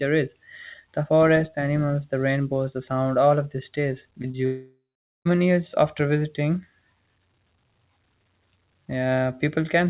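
Short concealed packet loss hits twice after "all of this stays", at 4.22 to 4.25 s and 4.31 to 4.35 s. About 20 ms arrived too late each time and was patched by extending the preceding sound, leaving brief smears.

A long network dropout is the likely cause of the gap from 4.45 to 5.27 s. A fading continuation of the last sound gives way to roughly 0.44 s of silence, and the audio resumes at "years after visiting" with about 0.8 s missing. Across the clip nothing is present above 4 kHz, consistent with G.711 A-law telephone coding at 64 kbps.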